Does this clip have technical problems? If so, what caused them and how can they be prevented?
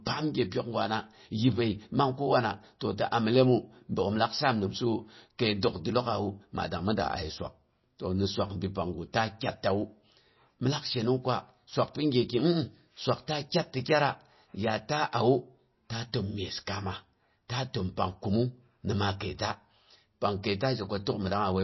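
Yes. Throughout the clip the speech has no content above about 5.8 kHz. The sibilants sound dull and swirly, and the damage is plainly audible. This is likely MP3 compression at a very low bitrate, one that fits roughly 24 kbps. Short of bits, the encoder cut the treble at a fixed point. It also dropped weak frequency lines that flicker between frames, which gives the watery texture. To prevent it, encode at a higher bitrate or keep a lossless copy.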